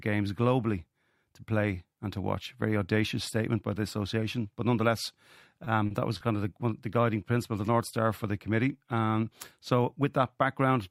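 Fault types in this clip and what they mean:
Short stall from a late packet, at 5.64, 5.86 and 6.17 s: each time the next packet arrived late, the jitter buffer ran dry and the receiver held the last sound for 20, 40 and 30 ms before resuming where it left off, so nothing is lost but each sound briefly drags with a faint buzz or dip.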